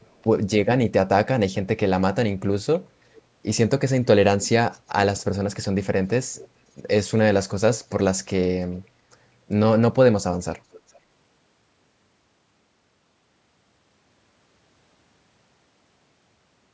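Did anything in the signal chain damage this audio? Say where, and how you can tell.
Yes. Faint delayed copies of the speech at 0.03–0.21, 3.16–3.22, 6.38–6.48, 8.74–8.82 and 10.72–11.0 s, lagging by about 0.44 s, point to echo leak, likely an incomplete echo canceller in call processing. The copies are much too late to be room reverb.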